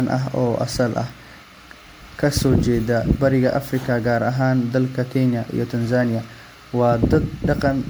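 From start to finish the speech carries generation loss: a swirly, hollow, smeared texture with softened consonant attacks and nothing above 20.1 kHz. It sounds worse than a single pass near 96 kbit/s MP3 would, likely from around seven successive re-encodes stacking quantisation noise and spectral holes.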